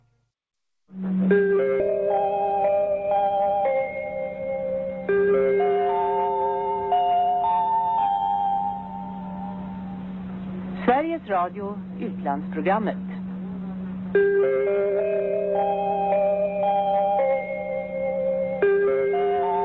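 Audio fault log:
1.80 s, skip ahead: the audio jumps forward with no gap filled in. Around 0.7 s is missing, and the two sides of the jump are joined almost directly. A stretch that was already queued behind later audio was dropped, either in transit or by the jitter buffer when it overflowed. That drop cut the delay by roughly the same amount, so the sound lurches from one moment to a point well past it.
1.94 to 3.30 s, jitter buffer speed-up: the audio runs at 107% speed with its pitch unchanged, so this passage sounds hurried. The buffer was holding more audio than it aims for, so the receiver cut short pieces of one or a few pitch periods many times in a row, removing about a tenth of a second in all. The band above 8 kHz is empty throughout, which fits the G.722 call codec on this path.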